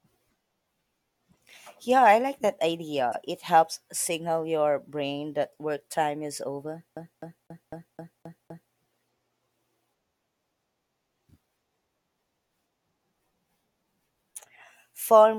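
From 3.12 to 3.15 s, and again faintly at 6.39 s, a corrupt frame was decoded. Damaged bits in a single compressed frame put energy at wrong frequencies, giving a brief chirp, squeak, blip or burst of noise. The first peaks around -15 dBFS and the second around -40 dBFS.

From 6.96 to 8.73 s the CD is stuck on one turn. The same 0.25 s segment repeats seven times with a short mute at each jump. This is an even, rhythmic stutter, unlike the isolated glitches above.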